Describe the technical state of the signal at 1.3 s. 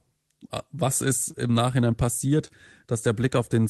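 Short concealed packet loss at 1.31 to 1.35 s, just after "was ist": about 20 ms never arrived, so the decoder extended the preceding sound and blended back, leaving a brief smear or wobble.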